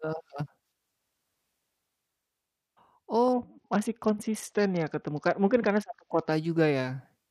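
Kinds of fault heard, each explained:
Bluetooth SBC bit pool drop: From about 3.33 s to 6.32 s the speech turns dull and gritty, which fits the encoder's bit pool falling from around 28 to about 7, near 66 kbps. With so few bits, the upper sub-bands get few or no bits and the rest are coarsely quantised. On a spectrogram the treble above several kHz vanishes abruptly across that stretch, replaced by grainy noise smeared between harmonics. The waveform envelope looks largely unchanged.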